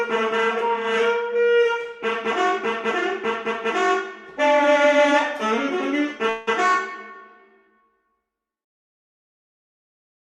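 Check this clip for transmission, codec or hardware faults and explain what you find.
One transmission fault stands out. From 6.29 to 6.49 s the audio smears into a buzzy, fading continuation of the sound just before it, lasting about 0.17 s and never falling fully silent, then resumes with roughly 0.18 s of material simply gone. This is likely a long network dropout. The stream stopped arriving, so the receiver stretched the last received sound to cover the gap, and the skipped portion was never played.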